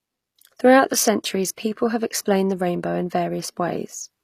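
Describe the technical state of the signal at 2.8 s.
At 2.8 s the speech carries the same plainly audible damage heard across the whole clip, likely HE-AAC compression at a rate consistent with about 24 kbps. Only the lower spectrum is coded; the treble is rebuilt by copying lower bands upward under a coarse envelope, so its harmonics fail to line up and sibilants turn gritty and lispy. A spectrogram shows a hard ceiling at 15 kHz and repeated, smeared texture above the crossover.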